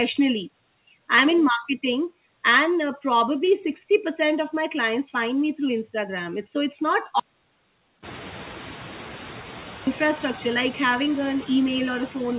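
Noise suppressor artifacts run through the whole clip. The suppressor treats steady background as noise and pulls those bands down frame by frame, by about 6 dB. So the floor dips in the pauses and climbs back under the speech. The band is capped near 4 kHz, which fits a G.711 A-law call path at 64 kbps.

At 7.20 s there is an audio dropout to silence. The sound stops mid-flow and does not return until 9.87 s, a gap of about 2.67 s. The gap is silent, with no room tone underneath. That points to a lost input, likely a disconnected device, a broken link or a brief mute, while silence kept being written. Anything said in that stretch is gone. When the sound returns, the room noise is higher, sitting about 17 dB below the speech.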